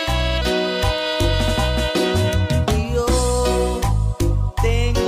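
From 0.41 to 0.98 s there are CD scratch ticks. Four short ticks recur, each under a millisecond long. A scratch spoils more data than error correction can repair on each disc revolution. The player patches or mutes those samples, leaving brief clicks.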